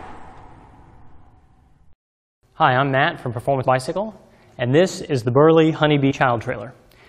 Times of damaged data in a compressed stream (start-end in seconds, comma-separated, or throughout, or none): 1.27, 3.63, 6.10-6.12